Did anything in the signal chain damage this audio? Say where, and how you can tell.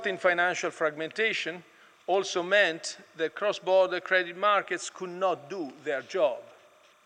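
Yes. The damage is in the analogue wiring: timecode bleed runs through the whole clip. A steady chirping warble sits behind the sound from start to finish, well down, roughly 35 dB under it. It flips between two pitches near 1 and 2 kHz. That is linear timecode. Its square wave switches frequency to encode bits. The pattern repeats at 29.97 frames per second. A timecode track or cable has leaked into the audio path.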